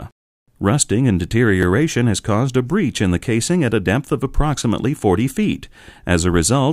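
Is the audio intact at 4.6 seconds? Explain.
No. At 4.63 s there is an overlapping chunks fault. The audio was handled in blocks that fit a 3-second chunk length, and the next block began before the previous one finished, so about 6.5 ms of sound plays twice at the join. It is heard as a brief click or stutter. On a waveform, a short stretch repeats with a jump where the copies meet. A spectrogram shows a thin vertical broadband line at that instant.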